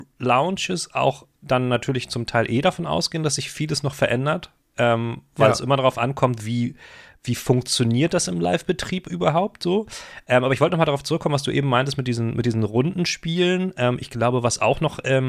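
Nothing in the speech recording points to a technical problem in how the signal was captured, processed or transmitted.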